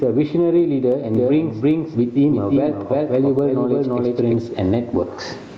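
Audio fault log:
Throughout: gain pumping. The level ducks under each loud syllable, swinging by roughly 20 dB, likely from input gain set far too high with a fast limiter clamping it. The waveform looks flattened.
1.15–4.35 s: doubled audio track. A second full-band copy of the speech trails about 300 ms behind at around 5 dB quieter, with no reverb tail, likely from a slower second capture path. It starts and stops abruptly, and the spectrogram shows each harmonic pattern repeated and shifted right.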